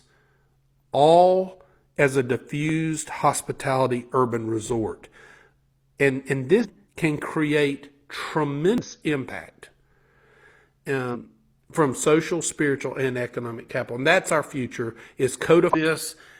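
This is a speech recording with two kinds of fault. At 2.69 s there's a tiny skip where a few milliseconds go missing and the two sides butt together with no silence. That's likely audio missing between chunks, with the recorder dropping a sliver while switching to the next 6-second block. Then there are four short blips from damaged data in a compressed stream, at 6.60–6.66 s, 8.78–8.85 s, 11.10–11.16 s and 15.70–15.76 s. Each one is the decoder misreading corrupted frames and losing sync until it finds the next frame header.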